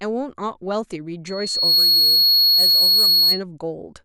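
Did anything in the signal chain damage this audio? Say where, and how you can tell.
Yes. Loudspeaker feedback squeal, an acoustic-loop fault at the analogue stage, runs from 1.25 to 3.44 s: a single 4.3 kHz tone swells over about half a second to roughly 15 dB above the speech. The microphone is hearing its own loudspeaker, and loop gain above one at that frequency lets it build.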